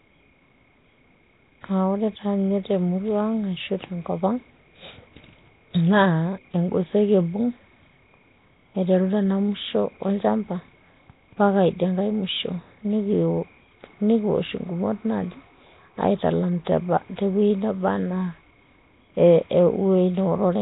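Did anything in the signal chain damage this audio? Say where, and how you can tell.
Yes, at the codec stage, throughout: rough, hissy haze around the speech, a smeared underwater quality, and nothing above 3.8 kHz. This is likely Nellymoser compression at a low rate fitting 16 kbps, with starved bands refilled with noise, unlike MP3's metallic swirl.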